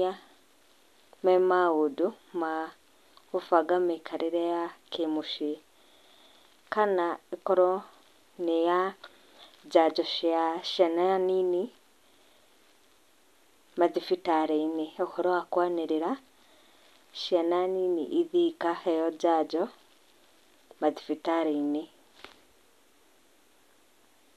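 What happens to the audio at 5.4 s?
Nothing goes wrong at 5.4 s; the speech runs through that moment intact, with no dropout, click or other fault.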